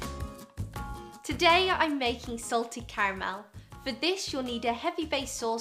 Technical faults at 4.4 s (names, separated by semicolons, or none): none